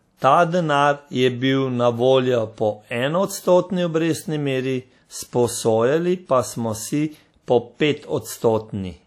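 From start to finish the speech carries a ringing, washy smear, with a hiss that swells and fades along with the voice instead of sitting steady underneath it. Quieter detail drops out and the edges of sounds blur. This is likely WMA compression: a transform codec coding in long blocks spreads its quantisation noise across tens of milliseconds and discards weak spectral lines, damage that fits a low bitrate around 48 kbps.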